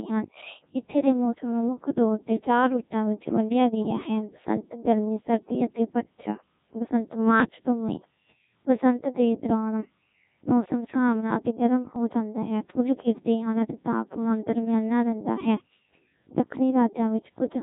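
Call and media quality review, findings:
Codec 2 vocoder across the whole clip, heavy damage. The path carries only pitch, voicing, energy and spectral envelope at a rate consistent with about 1.6 kbit/s, and the receiver rebuilds speech from sine waves. Result: buzzy, robotic speech with no original waveform detail.

Bit errors on digital voice radio, 3.83 to 3.93 s. Corrupted parameters in what sounds like two vocoder frames, at a fairly high error rate of a few percent. Pitch, level and timbre jump abruptly and the speech breaks into warbling gibberish.

Bit errors on digital voice radio, 11.96 to 12.14 s. A milder burst, roughly one to two percent of bits flipped, again spanning what sounds like two frames. Brief bleeps and tonal lurches replace the synthetic speech.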